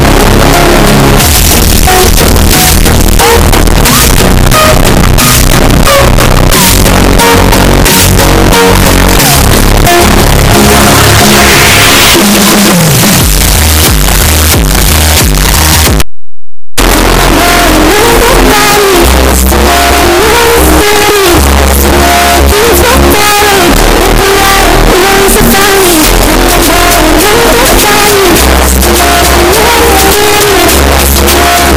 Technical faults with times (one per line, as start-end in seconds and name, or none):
0.00-31.76 signed and unsigned mixed up